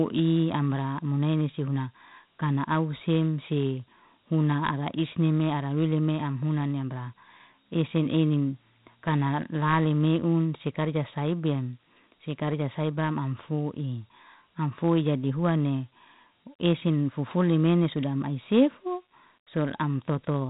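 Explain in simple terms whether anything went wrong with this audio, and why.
The speech has been through Dialogic VOX ADPCM coding from start to finish. This old telephone-system format stores each sample as a small step guess, leaving a gritty hiss trailing the voice and cutting off everything above about 3.8 kHz, so it sounds muffled.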